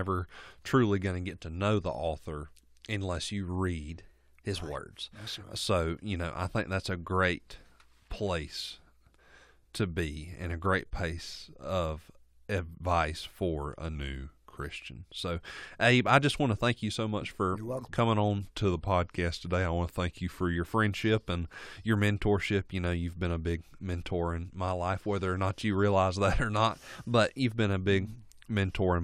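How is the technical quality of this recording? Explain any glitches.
The speech is marred by four drift correction steps, where speed and pitch jump together and then return. They fall at 3.90–5.18 s (after "the author unless you"), 13.96–14.64 s (after "of advice for a"), 18.42–20.55 s, and 26.78–27.59 s (between "that or not" and "been a big"). The first and last play about 6.3% fast, lifting pitch roughly 106 cents. The middle two run 6.3% slow, dropping about 113 cents, a little over a semitone. The likely cause is clock-matching software abruptly changing playback rate to refill or drain its buffer. Unlike wow or flutter, the shift is a steady block with clean edges, not a gradual or repeating wobble.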